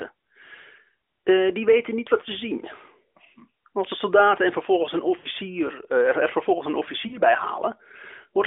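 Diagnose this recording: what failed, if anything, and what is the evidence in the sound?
The fault is lost AMR speech frames, arising on the radio link and concealed in the decoder. After "soldaten en vervolgens een" the speech smears and sags from 5.18 to 5.26 s, a gap of about 60 ms, which fits three lost 20 ms frames. After "vervolgens een" a shorter dropout runs from 7.08 to 7.20 s, about 40 ms, fitting two frames. Frames that failed their checksum were replaced by the decoder repeating the last good pitch and vocal-tract settings while lowering the gain, so the sound stretches and fades rather than clicking off. On a spectrogram, flat, frozen harmonic bands fade within the narrowband 300 Hz to 3.6 kHz range of the call. The waveform shows an envelope that sinks over each gap.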